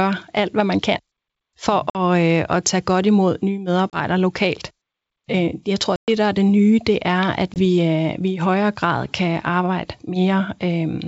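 Packet loss on an ADPCM call occurs at 1.90–1.97 s, 3.90–3.97 s after "tage godt imod nye", 5.96–6.09 s between "jeg tror" and "der er det nye", and 7.54–7.59 s. Each silent hole drops 20 to 120 ms. The decoder's predictor and step size then lose track, so the G.722 wideband speech resumes slightly distorted before settling.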